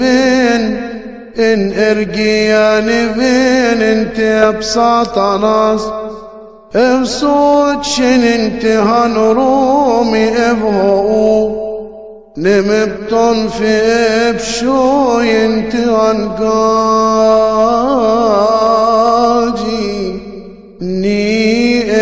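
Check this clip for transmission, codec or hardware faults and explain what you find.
Nothing stood out on listening to the clip.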